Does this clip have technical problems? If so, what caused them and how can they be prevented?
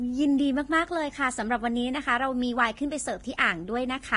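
Yes. Throughout the speech there is a grainy, hissy quality. Sibilants and breathy sounds turn into rough noise, tones sound roughened, and nothing is heard above about 10.6 kHz. The likely cause is heavy Vorbis compression. The encoder keeps a smooth outline of the spectrum but quantises the detail on top of it so coarsely that the upper band becomes noise of similar energy. The band limit and the heaviness of the damage point to a low bitrate, around 30 kbps. Encoding at a higher quality setting, or using a lossless format, would prevent this.

At 3.37 s a short burst of hiss arrives just ahead of a sharp onset, and the attack sounds softened and smeared. This is pre-echo, spread over about 13 ms. The codec distributes its quantisation noise across an entire transform block. When a sudden attack falls late in the block, noise sized for that loud moment also spills into the quiet stretch before it, where nothing masks it. 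A higher bitrate, or an encoder that switches to shorter blocks around transients, would prevent it.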